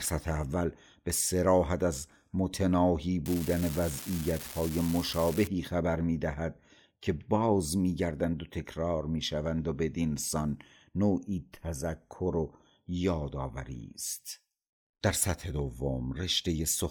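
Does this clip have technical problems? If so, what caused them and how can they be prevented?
Yes. From 3.26 to 5.47 s an unreliable data bit corrupts the signal: one marginal data line flips at random, adding identical spikes of about -23 dBFS, heard as a steady crackle that continues through pauses. Checking and replacing faulty cabling, connectors or converter hardware prevents it.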